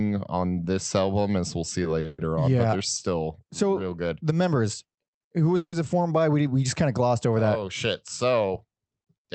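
At 2.00 s, just after "album as we'll see", a short stall from a late packet occurs. A packet missed its playout time and the jitter buffer ran dry, so the receiver stretched the last sound for about 40 ms until the packet arrived, then resumed from the same point. Nothing is lost; the sound is simply held too long, heard as a buzz or dip, and everything after it plays 40 ms later.

Straight after, from 2.06 to 2.20 s, comes a call audio freeze, likely caused by packets being held up in transit and the buffer emptying again. The receiver filled about 120 ms by continuing the last sound as a fading buzz or hiss, without dropping to silence. A second freeze runs from 5.56 to 5.74 s, between "members who" and "it formed by". Here about 160 ms is filled, and the last 70 ms of that decays to silence. In both cases playback resumes where it stopped, so gaps are inserted rather than audio removed, pushing the timing later by a further 120 ms and 160 ms.

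The surrounding audio carries the coding noise of the call codec, with the high frequencies cut off around 8 kHz.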